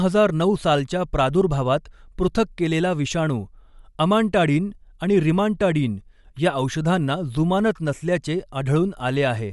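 From start to finish, the speech carries plainly audible codec damage. Nothing sounds above 11.5 kHz. The top octave is simply gone. What remains up high has a breathy, grainy edge. This is likely Bluetooth LC3 compression. The codec drops upper spectral detail it cannot afford and fills the gaps with noise. The amount of damage fits a rate around 48 kbps with 10 ms frames.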